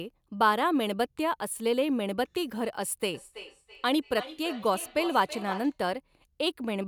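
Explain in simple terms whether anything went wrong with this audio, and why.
Feedback echo between two devices, from 3.14 to 5.79 s: the speech comes back at a steady gap of about a third of a second. Two nearby devices on one call pass the sound around, and each echo canceller removes only what its own speaker plays.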